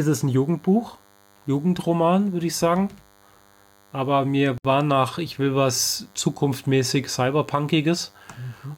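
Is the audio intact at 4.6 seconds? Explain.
No. From 4.58 to 4.65 s the speech drops out in a gap of about 68 ms, its edges smeared so the silent part is shorter, and then resumes exactly where it left off with "war nach ich will". This is a gap at a join of encoded pieces. The audio was encoded in separate sections and spliced without trimming, so the start-up delay of one encoder run and the padded final frame of the other both remained as an audible hole.

Running through that moment, as through the whole clip, is a thin, steady buzz about 35 dB below the speech. It is a DECT cordless phone buzz. A nearby handset or base station sends a radio burst every 10 ms, and the audio circuitry rectifies those bursts into a 100 Hz tone with a dense stack of harmonics.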